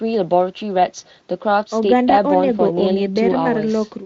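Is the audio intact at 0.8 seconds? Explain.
Yes, the speech at 0.8 seconds is intact, with no fault at that moment.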